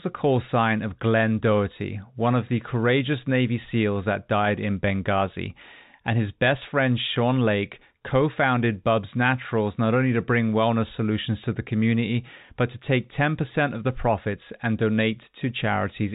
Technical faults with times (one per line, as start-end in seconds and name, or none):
none